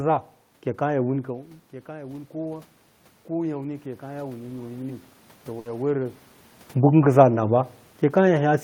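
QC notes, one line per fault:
3.27–6.02 s, automatic gain rising: after the input level drops by about 14 dB, the gain control slowly adds about 6 dB, so the voice and the room noise swell together. The waveform envelope climbs gradually, and the spectrogram's noise floor brightens across the band.
5.59 s, burst of packet loss: about 60 ms is filled by extending the last sound and fading it out, and another 60 ms of audio is skipped. The spectrogram shows smeared, flattened harmonics or decaying hiss, followed by an abrupt jump in content.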